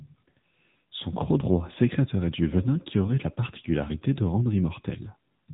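Thin, boxed-in and buzzy from start to finish, the speech sounds as if heard down an old mobile call, with a synthetic edge on every voiced stretch and nothing at all above about 3.8 kHz. This is the AMR narrowband mobile codec at work: the 8 kHz sampling removes the upper band, and the pulse-driven vocal-tract model, at a rate near 8 kbps, leaves plainly audible buzz and roughness.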